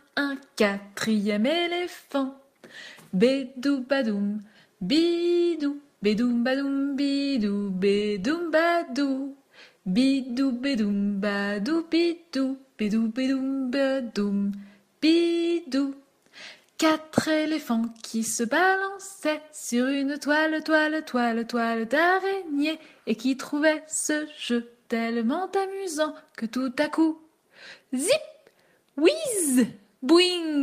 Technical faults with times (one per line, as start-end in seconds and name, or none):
none